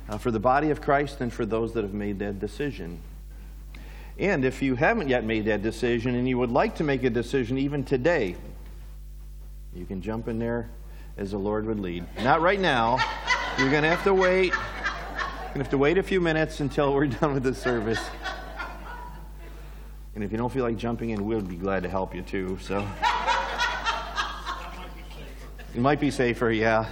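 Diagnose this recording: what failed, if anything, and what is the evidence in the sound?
A steady low drone sits under the sound from start to finish, a 50 Hz tone with a few low harmonics stacked above it, running only roughly 15 dB below the programme level. This is mains hum, and the fault lies in the analogue wiring: a ground loop or a nearby transformer is coupling the 50 Hz power line into the signal before conversion.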